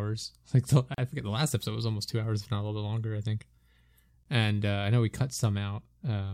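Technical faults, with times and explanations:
0.94–0.98 s, gap at a join of encoded pieces: untrimmed encoder padding leaves a 36 ms gap, edges smeared, just before "forget the last episode".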